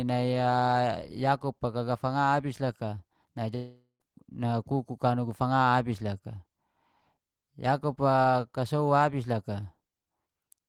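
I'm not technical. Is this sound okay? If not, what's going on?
No. From 3.55 to 4.02 s there is what sounds like a long network dropout: the audio likely stopped arriving for a moment. The player stretches the last sound into a fading buzz, goes briefly quiet, and the speech resumes with almost half a second missing.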